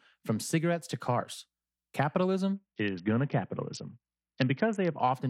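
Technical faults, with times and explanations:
2.56–5.00 s, Bluetooth SBC bit pool drop: the link appears to have congested, and the sender cut the SBC bit pool sharply to keep the stream going. Starved of bits, the encoder left the highest sub-bands nearly empty and quantised the remainder coarsely, so the speech turns dull and muffled while a gritty, granular noise rides on it. The depth of the loss fits a fall from a bit pool near 31 to about 6, roughly 55 kbps.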